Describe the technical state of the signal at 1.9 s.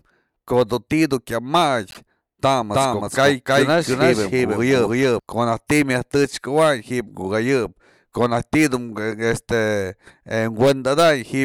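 At 1.90 to 1.98 s there's repeated frames: a 26 ms chunk plays three times in a row, a quick stutter that stretches the speech by about 52 ms.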